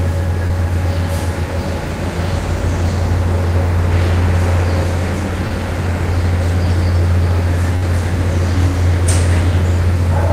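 At 0.47 to 0.51 s and again at 5.47 to 5.52 s there is short concealed packet loss. Each time about 20 ms of the recording failed to arrive in time, and the receiver papered over the hole by extending the sound just before it for roughly 21 ms and 26 ms, then cross-fading back into the real signal. The result is a tiny smear or wobble.

At 7.76 to 7.84 s a burst of packet loss removes about 60 ms. The decoder again carries the last sound forward, for about 57 ms, but lets it sag in level as the gap lengthens, giving a held, fading tail. The audio then picks up further along, so the material that belonged in that stretch is simply gone. The gap is longer, the concealment decays audibly, and the sound lurches forward rather than flowing on.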